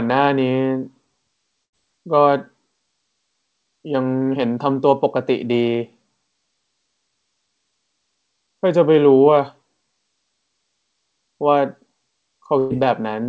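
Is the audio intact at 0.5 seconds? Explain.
Yes, the speech at 0.5 seconds is intact, with no fault at that moment.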